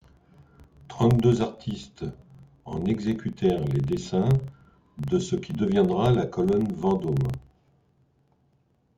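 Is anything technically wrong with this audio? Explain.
Yes. A filter restarted on every block runs through the whole speech clip. The filter drops its memory at each block boundary and starts again from silence, so each new block opens with a small transient. These restarts repeat at about 23.4 Hz, which fits 2048-sample blocks at a 48 kHz rate. The result is a low, regular buzz under the speech that rises and falls with the speech's level.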